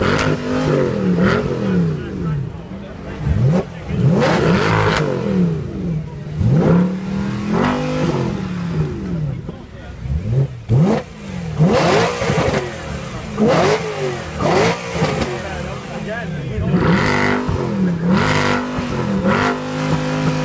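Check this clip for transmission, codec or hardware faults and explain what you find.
I find nothing to explain in this clip.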